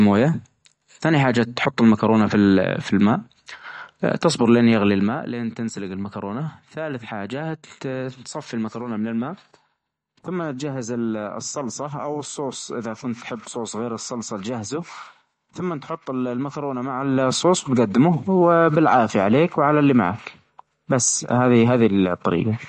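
The speech in this clip carries plainly audible codec damage throughout, likely from MP3 compression. Nothing is present above 10.6 kHz, where the encoder has cut the treble outright, and the weaker spectral detail that survives flickers in and out from frame to frame, giving the watery, swirly texture and the smeared consonant edges typical of a starved bit budget, which points to a bitrate somewhere around 42 kbps. There are also two bursts of zipper noise, each lasting under half a second. From 4.90 to 5.28 s, between "تصبر لأن" and "لين تنسلق", the level drops by roughly 10 dB. From 16.93 to 17.32 s, between "ثمن تحط المكرونة" and "وتجدمه وبالعافية عليك وعلى", it rises by roughly 10 dB. In both cases the gain moves in about fifty discrete steps a second rather than along a smoothed ramp, and each jump leaves a small click, so the ramp is heard as a fine ticking rasp laid over the sound while the level travels.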